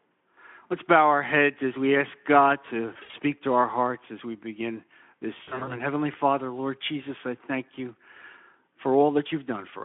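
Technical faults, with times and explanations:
2.93–3.14 s and 5.43–5.78 s, VoIP packet loss concealed by the speech codec: gaps of up to 60 ms, just before "to our hearts as" and just after "as we begin this", become fading smears as the narrowband Speex decoder extrapolates its last pitch and filter, then recovers slowly.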